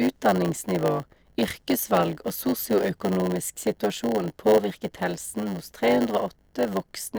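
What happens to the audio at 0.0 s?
From 0.0 s and for the whole clip, a block size mismatch (padded) means one stage hands over shorter blocks than the next expects, with zeros filling each remainder. The gaps produce a 100 Hz buzz, and the speech runs at 0.919 speed, slower but with its timbre intact.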